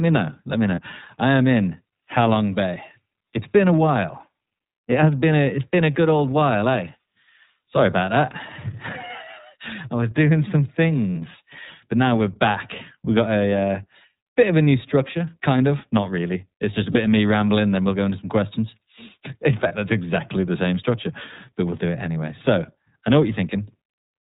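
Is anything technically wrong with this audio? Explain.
Yes. The speech has passed through the iLBC codec, a narrowband VoIP coder whose band stops at 4 kHz and whose level of damage fits its 13.33 kbps, 30 ms-frame mode. The result is dull, slightly rough and synthetic-sounding speech lacking any upper treble.

There are also lost iLBC frames at 0.75, 11.12, 16.92 and 19.68 s, each lasting about 30 ms, which fits one dropped frame apiece. The decoder filled each gap by repeating the last pitch cycle mixed with noise, heard as a brief held, buzzy vowel before the speech snaps straight back.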